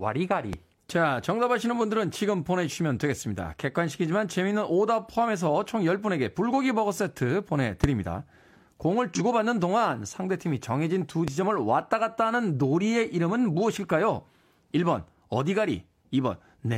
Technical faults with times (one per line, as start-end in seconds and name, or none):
0.53-0.56 loud pop
7.84-7.86 loud pop
9.15-9.21 damaged data in a compressed stream
11.28-11.30 loud pop